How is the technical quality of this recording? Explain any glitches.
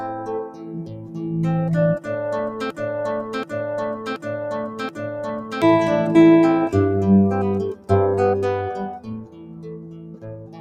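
The technical quality is poor: a speech-style noise suppressor is working against the material throughout, and the playback gets stuck in a repeating loop partway through.

Noise suppressor applied to music or sounds, across the whole clip: a processor tuned for speech is treating steady tones, ambience and decay as background noise and pulling them down. The gain it applies swings by roughly 15 dB. Onsets slip through largely intact, but sustained parts keep getting turned down, so the level pumps and the texture sounds thin and unsteady instead of holding a natural body.

Sound cut by the noise suppressor, at 0.48–1.23 s, 3.97–4.26 s, 4.7–5.02 s, 7.75–7.9 s and from 8.99 s to the end: in each of these stretches the suppressor judged the sound to be noise and cut it harder than its surroundings. The deepest drops reach about 8 to 10 dB. Held and fading material sinks and its decay is chopped short, so these passages sound hollowed out. 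The final stretch of about 1.6 s is the longest.

Broken-record loop, from 2.70 to 5.62 s: a fragment of 0.73 s repeats exactly, back to back, four times. This is likely a stall in the player, encoder or stream that kept resending the last piece it had buffered. The result is a mechanical stutter, and whatever should have played during those roughly 2.9 seconds is missing. Two of the suppressor dips fall inside this looped section.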